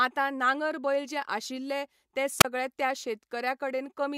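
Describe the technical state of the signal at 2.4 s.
At 2.4 s the speech breaks up with a wireless microphone squelch dropout. It runs from 2.39 to 2.45 s. The radio link from the FM transmitter weakens, and the receiver's squelch cuts the output to stop the noise from getting through. You hear a brief surge of hiss, then a hole of near silence lasting about 31 ms. The speech then returns. The whole event is very short, a quick stutter in the signal.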